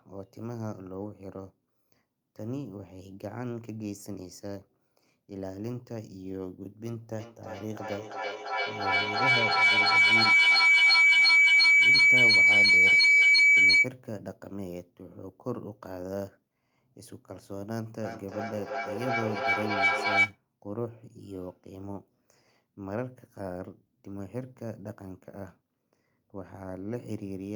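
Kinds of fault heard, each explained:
Feedback howl: sound circling from loudspeaker back into microphone gains level each pass, swelling into a tone near 2 kHz that pulses roughly every third of a second and peaks about 15 dB over the speech. Unlike echo, repeats grow rather than fade.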